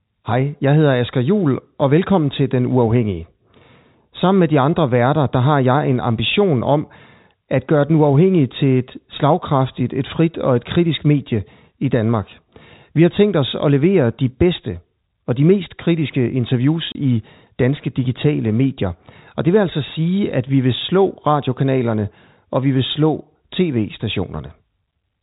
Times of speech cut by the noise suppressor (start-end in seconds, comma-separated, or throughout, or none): none